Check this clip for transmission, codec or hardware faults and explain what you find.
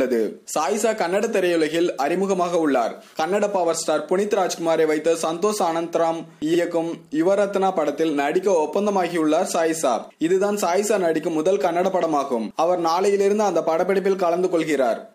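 One transmission fault is present: repeated frames at 6.53 to 6.58 s. A 46.4 ms block of compressed audio, which fits two codec frames, was delivered twice, so the decoder plays that slice of sound once more and the clip runs 46.4 ms longer. It is heard as a brief stutter. On a spectrogram the same short pattern appears twice side by side.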